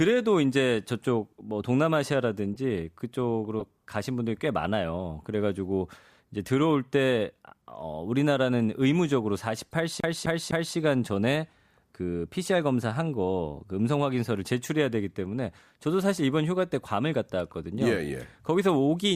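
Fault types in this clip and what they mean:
Corrupt frame decoded: Brief chirps and blips of misplaced noise break into the speech at 2.54 to 2.59 s, 3.60 to 3.62 s, 9.68 to 9.73 s and 12.45 to 12.48 s. The ones at 3.60 s and 12.45 s are the loudest, peaking around -20 dBFS, while the others sit far lower. Each comes from a compressed frame whose bits were damaged but decoded anyway, so misread gains and codes scatter energy across the wrong frequencies for a frame or a few.
CD stuck on one turn: From 10.00 to 10.76 s the speech stutters evenly, the same 254 ms slice playing three times over with a tiny gap at each jump, before moving on. That rapid, regular repetition is the sound of a skipping disc, where a scratch knocks the laser back one track at the same point on each revolution, replaying a single turn's worth of audio.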